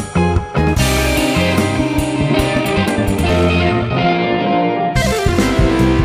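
From 2.51 s to 5.35 s the audio runs at 1.95 times its normal pace while the pitch stays put. This is a time-stretched section. Software likely squeezed this part to fit a shorter length, dropping short slices. It sounds rushed.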